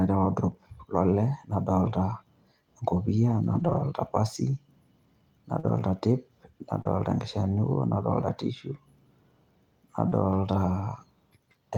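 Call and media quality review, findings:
Rough, grainy stretches with no gap at 1.85–1.95 s (60 ms), 3.43–3.81 s (200 ms, the longest), 5.63–5.81 s (100 ms), 6.85–6.87 s and 10.11–10.13 s (20 ms each). Lost packet rebuilt from error correction, Opus jitter/decoder path. The next packet's low-bitrate redundant copy was decoded in place of the missing audio, so continuity holds but detail degrades. Durations fit 20 ms frames.

Brief smear or wobble at 5.59–5.65 s, 6.81–6.87 s and 10.09–10.13 s, each spanning roughly 20–40 ms of missing audio. Short concealed packet loss at the receiver. Late or absent packets were covered by extending the preceding sound, then crossfading back. Each concealment runs straight into a stretch of rebuilt frames, giving a smeared-then-rough transition.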